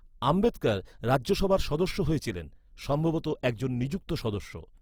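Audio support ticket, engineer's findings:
Grainy, rough speech throughout. Bands are noise-filled rather than holed, so there is less swirl than MP3 would give, and full bandwidth runs to 20.3 kHz. Likely Opus compression in CELT mode, fitting about 24 kbps.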